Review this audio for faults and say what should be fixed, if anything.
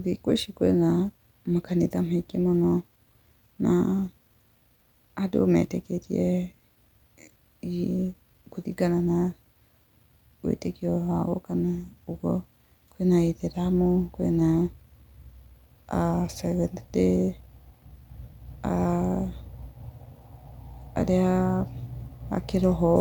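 No faults turned up in this audio, so nothing needs to be fixed.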